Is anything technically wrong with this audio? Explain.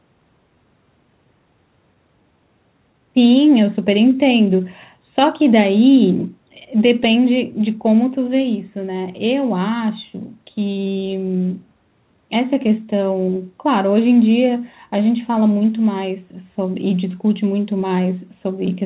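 Yes, there's a timing problem running through the whole clip, plus a short cluster of dropouts.

Clock drift between sender and receiver: This is present all the way through. The sending side's clock seems to be running slow, by roughly 4 percent, so audio arrives a bit slower than the receiver plays it out. The jitter buffer keeps drifting toward empty, and the receiver has to keep making up time. You don't hear the drift directly. You hear the receiver's constant patching, described next.

Repeated timing corrections: From about 0.55 s to 18.74 s the receiver keeps stretching or repeating tiny slices of sound to cover for the slow sender. Playback runs at about 97 percent speed, and the fixes add something like 0.7 s in total. Each fix is small and they're unevenly spaced, so the result is a slightly lagging, uneven pace with the odd faint stutter rather than any obvious glitch.

Scattered short gaps: Between about 6.17 s and 7.58 s there are around four small holes where packets came in late or went missing. 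The receiver hid each one by carrying the previous sound forward. Nothing actually drops out. The concealed bits add up to only a few tens of milliseconds, the longest around 15 ms, and they come across as brief ticks or little smears in that stretch.

The dull, band-limited sound with nothing above 4 kHz comes from the G.711 call codec and isn't a fault.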